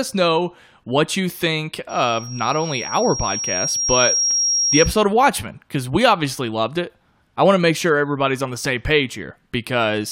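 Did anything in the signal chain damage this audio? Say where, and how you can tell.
Yes. From 1.89 s to 5.01 s, just after "know what you think", a loudspeaker feedback squeal enters in the analogue stage, in the acoustic loop where the microphone picks up the loudspeaker it feeds. A single tone at 5.6 kHz swells over roughly two seconds until it sits about level with the speech. That is the loop gain exceeding one at that frequency. Unlike a steady electrical whine or hum, it grows by itself rather than appearing at full strength.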